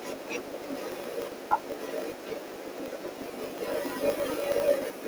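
Throughout the speech, a filter restarted on every block injects a transient at each block boundary, producing a 50 Hz buzz that tracks speech level, consistent with 20 ms blocks.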